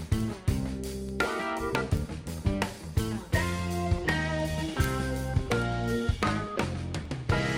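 A receiving device on a digital link is running on its own clock instead of locking to the sender's, so the two drift apart steadily. Each time they slip past one another, a sample is dropped or repeated, causing word clock ticks from 0.21 s to 7.50 s. They arrive at a regular rate of roughly ten per second, around seventy clicks in all, each a single-sample disturbance. That spacing points to a clock mismatch of about 200 parts per million.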